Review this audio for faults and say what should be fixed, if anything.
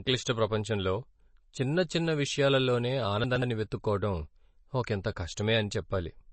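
The speech was likely encoded as low-bitrate MP3, around 32 kbps, which starves the encoder of bits. Weak frequency lines drop in and out between frames, so the speech sounds plainly watery and swirly, with smeared attacks and nothing above about 8.3 kHz. Re-encode from the original at a higher bitrate, or use a lossless format, to prevent this.

Between 3.24 and 3.42 s, just after "చిన్న చిన్న విషయాలలోనే", the chunks play out of order. A 60 ms chunk was delivered or written late and landed two places after where it belonged. That span sounds jumbled, with hard joins where the order breaks. Reorder chunks by sequence number or timestamp before playback or writing to prevent this.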